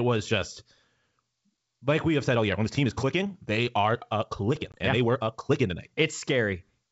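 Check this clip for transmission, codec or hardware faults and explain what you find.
Two faults stand out in this speech, one a change of pace and one a brief dropout, both heard through clean G.722 wideband telephone coding with no more than faint coding damage.

From 2.25 s to 5.91 s, just after "like we have", the speech suddenly rushes ahead at about 1.49 times normal speed while its pitch stays put, so it sounds rushed. This is likely a time-stretched section, where software squeezed the audio to fit a shorter length, preserving pitch by discarding short slices of the waveform rather than simply playing it faster.

Within that stretch, from 4.72 s to 4.78 s, there is a sharp-edged gap about 20 ms long, consistent with a single lost packet, followed by brief roughness as the speech resumes slightly distorted before settling. This is packet loss on an ADPCM call: silence filled the hole, and the receiver's adaptive predictor and step size drifted from the sender's until they resynchronised a few tens of milliseconds later.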